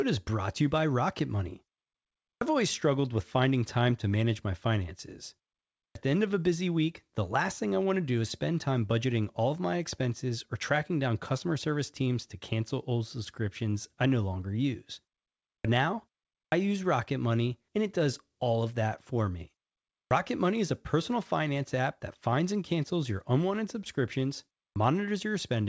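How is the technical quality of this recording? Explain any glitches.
The recording has one recurring glitch: a clipped start after a pause. It comes through a G.722-style wideband call path with nothing above 8 kHz.

Clipped start after a pause: at 2.36, 5.90, 15.59, 16.47, 20.06 and 24.71 s, the dormant output wakes late and swallows about 50 ms. Waveforms jump abruptly from flat silence, and spectrograms show missing onsets.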